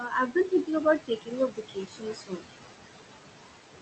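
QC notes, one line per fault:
Throughout, noise suppressor artifacts: the background sinks away in the gaps and rises again under the speech. The suppressor pulls steady noise down by about 17 dB, frame by frame, across the bands it judges to be noise.
0.00–0.82 s and 0.99–2.48 s, speech cut by the noise suppressor: soft consonants and word endings sound swallowed, about a third of a second in the first stretch and around a second in the second, dropping by up to about 14 dB and 17 dB. The suppressor mistook these quiet speech parts for noise and turned them down too.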